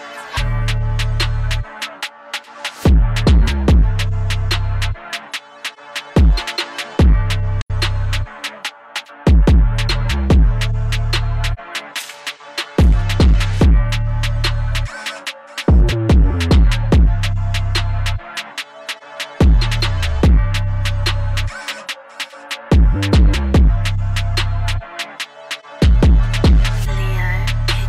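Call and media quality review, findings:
AAC frame loss with muting: soft-edged dropouts at 7.61–7.71 s (about 85 ms, fits two lost frames) and 11.54–11.59 s (about 43 ms, one frame). Decoder zeroed the spectrum. Spectrogram shows full-band vertical gaps, and the waveform tapers in and out.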